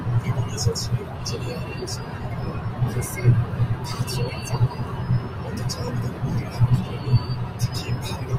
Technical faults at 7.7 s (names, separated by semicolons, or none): noise suppressor applied to music or sounds